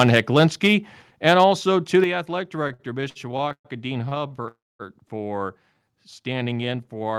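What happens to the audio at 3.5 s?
Packets reached the receiver late between 2.63 and 3.67 s, so its jitter buffer emptied eleven times and it kept extending the last sound, fading it during the longest 120 ms wait. These repeated stalls (stutter) drag and stutter the speech without losing any of it.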